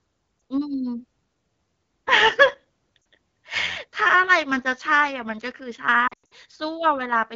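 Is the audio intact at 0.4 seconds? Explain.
No, a single lost AMR speech frame at 0.39 to 0.41 s: the decoder repeats the previous frame's settings at reduced gain, giving a brief warble rather than a hard silent gap or click.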